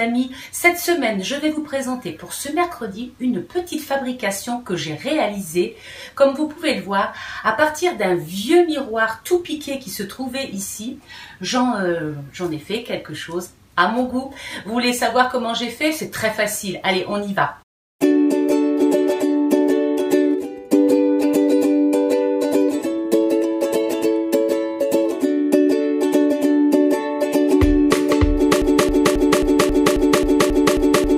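Near the end, at 28.62 s, the player, encoder or stream likely stalled and kept resending the last fragment it held, producing a broken-record loop. A piece of about 0.27 s repeats exactly, back to back, ten times, and the loop runs to the very end of the file at 31.18 s. The sound stutters mechanically on the same short slice, and whatever audio should have filled those final two and a half seconds is lost.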